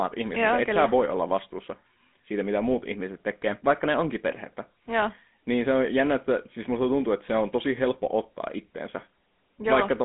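From start to finish the speech carries GSM full-rate codec damage, and it's plainly audible. The codec rebuilds the voice from a vocal-tract model excited by a sparse, regularly spaced pulse train, so everything picks up a buzzy, gravelly grain, which fits the old 13 kbps rate. The line band sits at roughly 200 Hz to 3.5 kHz, with nothing above 3.8 kHz, so it sounds thin, boxed-in and dull up top.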